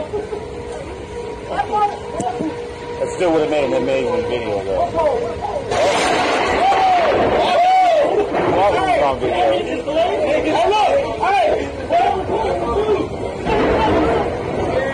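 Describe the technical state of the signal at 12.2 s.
At 12.2 s the signal is intact, with no audible fault at that moment.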